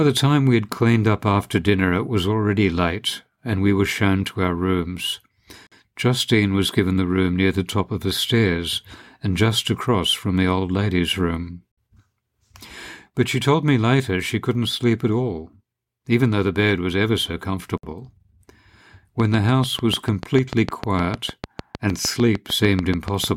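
At 5.67, 11.72 and 17.78 s, the speech drops out for about 48, 59 and 59 ms. These are gaps at the joins of encoded pieces, six seconds apart. Separately encoded segments were joined with their encoder delay and end padding left in. Each gap has smeared edges, and the speech resumes where it stopped.

From 19.2 to 23.25 s, a train of clicks runs at a steady 6.7 per second, around thirty in all. The clicks sound alike and rise well above the speech, ticking through pauses too. Interference from nearby equipment or a faulty connection is the likely source.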